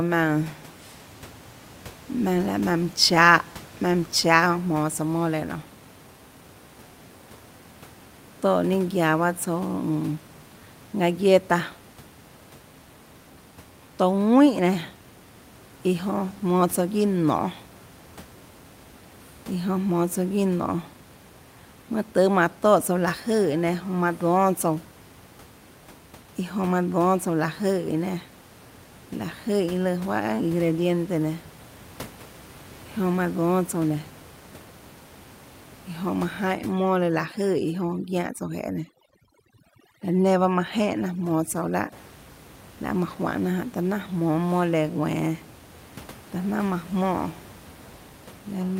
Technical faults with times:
36.54-41.92 overdone noise removal

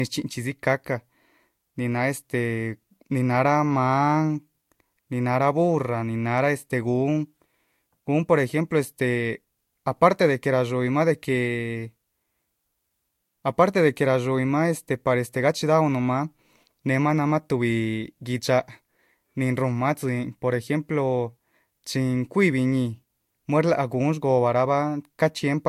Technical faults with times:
0.00-25.68 transcoding between lossy codecs

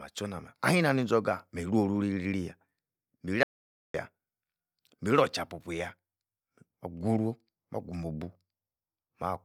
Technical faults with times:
3.43-3.94 audio dropout to silence

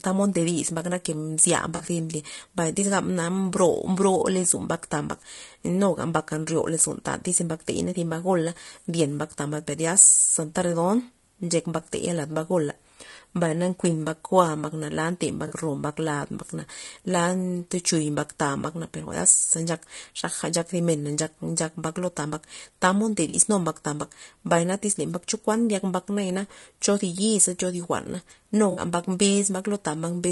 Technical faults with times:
0.00-30.32 low-delay AAC compression
1.75-1.81 AAC frame loss with concealment
15.47-15.54 AAC frame loss with concealment
23.29-23.35 AAC frame loss with concealment
28.71-28.81 AAC frame loss with concealment

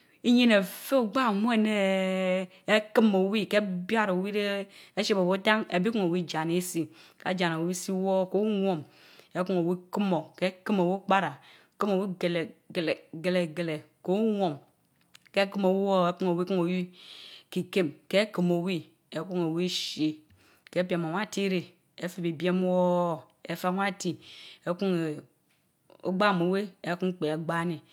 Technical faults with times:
none

